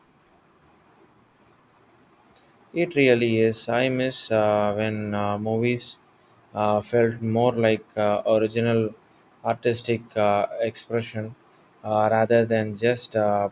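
A recording of speech, with no technical faults to be heard anywhere in it. Nothing in the audio calls for a time or a cause to be given.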